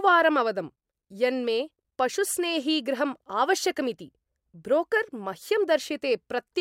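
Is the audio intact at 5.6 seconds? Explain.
Yes, the speech at 5.6 seconds plays through intact, with no audible fault at that moment.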